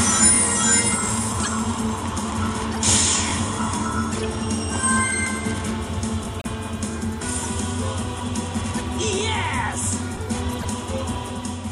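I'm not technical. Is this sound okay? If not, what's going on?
No. At 1.43, 2.72, 4.12, 7.42, 8.77 and 10.53 seconds there is a corrupt frame decoded: small chunks of the compressed file were damaged, and the player played them anyway, so each comes out as a short chirp or burst of noise, lasting from a few hundredths to about a tenth of a second.

At 6.38 seconds there is a corrupt frame muted: here the player rejected the damaged chunks and put silence in their place, so the sound drops out abruptly for about 0.08 seconds, which fits three frames, then resumes on time.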